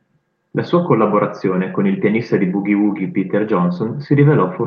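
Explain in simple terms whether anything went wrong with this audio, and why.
Nothing went wrong with this speech recording. It came through a normal internet call connection, which is why the highest, brightest sounds stop at around 12 kHz.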